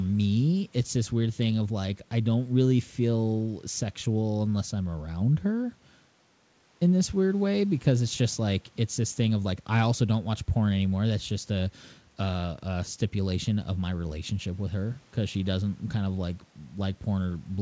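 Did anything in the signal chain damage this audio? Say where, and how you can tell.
No, nothing in the signal chain damaged this speech.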